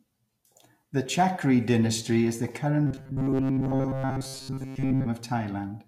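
From 2.87 to 5.07 s, after "dynasty is the", robotic sound from repeated short buffers: a rigid metallic buzz near 133 Hz, likely from looping roughly 7.5 ms fragments while most incoming speech is skipped.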